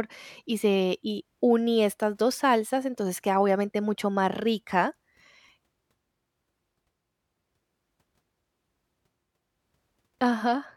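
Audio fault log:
No audible faults detected.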